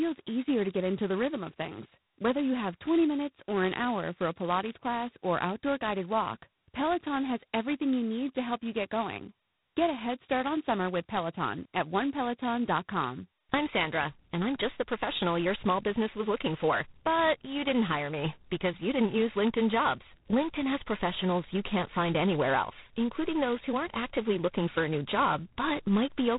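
Throughout, G.726 ADPCM coding is heavy. A harsh, rasping hiss rides on the speech and follows its level. Nothing passes above 3.9 kHz. This fits the 16 kbit/s mode.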